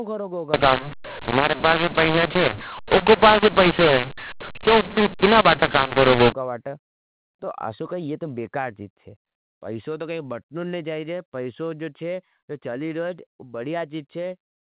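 From 0.54 s to 6.32 s, just after "करोगा उका", the speech shows a mu-law and A-law mix-up: mu-law telephone samples are decoded with the A-law curve. Levels come out scrambled, making the speech harsh and distorted, and quiet gaps fill with noise.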